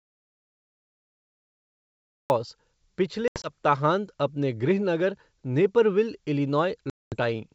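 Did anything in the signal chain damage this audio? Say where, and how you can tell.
Yes. The opening 2.3 seconds are an audio dropout to silence, already under way when the clip begins and lasting until 2.3 s. The gap is silence with no room tone or noise floor, so it didn't come from a quiet room or a noise gate. The stage is at the input or capture end: the likely cause is that the source was lost, through a disconnected device, a failed link or a mute, while the recorder kept writing silence.

Two shorter holes come from packet loss on an ADPCM call, a network fault. The first, from 3.28 to 3.51 s, removes about 100 ms in pieces scattered over 160 ms, with the longest run 80 ms. That fits roughly five packets of 20 ms. The second, from 6.90 to 7.16 s, removes about 220 ms, around ten packets. These gaps end differently from the dropout. After each hard-edged gap the speech comes back slightly distorted, then settles within tens of milliseconds. 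That happens because the decoder's adaptive predictor and step size have drifted out of step with the sender's. The G.722 wideband coding at 64 kbit/s carrying the call is not where these holes come from.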